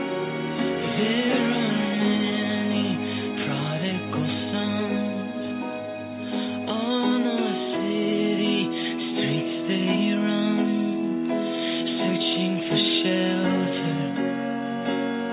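Nothing in this recording trips any alarm: no dropouts, glitches or other technical faults turn up anywhere along the way.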